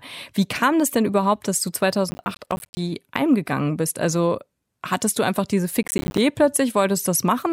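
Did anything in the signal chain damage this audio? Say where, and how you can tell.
Yes, there's processor overload crackle at the driver or buffer stage. Right after "denn überhaupt dass du" it tears up from 2.11 to 2.77 s, and again after "hattest du einfach diese" from 5.83 to 6.18 s. The grit is a run of short dropouts to silence with hard edges, which fits buffers of around 10 ms missing their deadlines a few dozen at a time while the processor was swamped, then clearing once the load eased.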